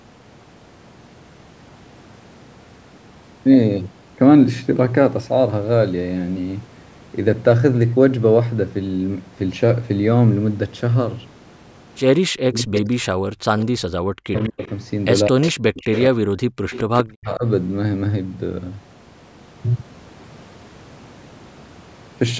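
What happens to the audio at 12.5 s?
At 12.5 s you're inside a short patch of speech suppressed in double talk, running from 12.25 to 12.88 s. The speech ducks hard, roughly 40 dB at its deepest, and is turned down for about half a second in total. The likely cause is an echo canceller that couldn't tell the near talker from loudspeaker echo while both sides spoke, so it turned both down.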